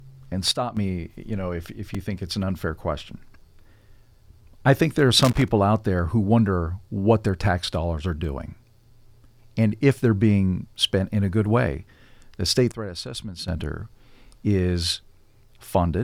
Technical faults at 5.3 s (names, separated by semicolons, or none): loose connector crackle